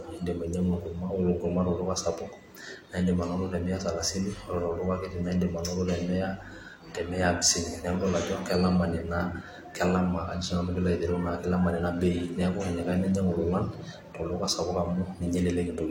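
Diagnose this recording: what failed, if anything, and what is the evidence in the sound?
Clock drift buffer slips at the driver or buffer stage: about ten regular clicks during the speech, every 1.44 s from 0.73 s to 15.18 s. The likely cause is two devices with clocks roughly 100 ppm apart, so the buffer periodically drops or repeats a few samples.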